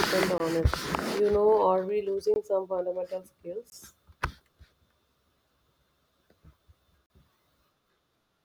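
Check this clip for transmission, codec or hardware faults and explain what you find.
The speech has four blocks of digital silence: 0.38 to 0.40 s, 2.34 to 2.36 s, 3.70 to 3.72 s (20 ms each), and 7.06 to 7.10 s (40 ms). The output buffer likely went unfilled and was zeroed, so the sound drops out abruptly, leaving short holes.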